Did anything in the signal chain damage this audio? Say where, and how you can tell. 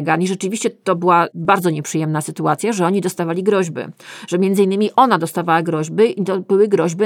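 Yes. There is a dropped buffer (overrun) at 1.45 s and again at 4.19 s, at the driver or buffer stage. Each is a jump, with the speech skipping forward and no gap of silence. About 5 ms goes missing at the first and around 20 ms at the second. The likely cause is the capture software not collecting its samples in time before the hardware overwrote them, so the two sides of the lost piece were spliced straight together.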